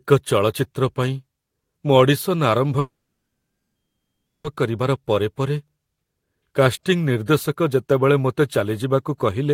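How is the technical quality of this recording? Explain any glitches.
The recording has one clear glitch, a call audio freeze from 2.79 to 4.47 s. The likely cause is packets stalling in transit until the receiver's jitter buffer ran dry. The receiver briefly stretched the last sound into a fading buzz or hiss, then held near-silence for about 1.55 s of the roughly 1.7 s gap. When the speech resumes it picks up exactly where it stopped, so nothing is lost, but everything afterwards arrives about 1.65 s late.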